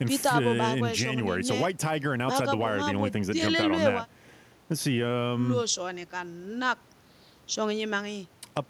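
No technical faults are audible anywhere in the recording.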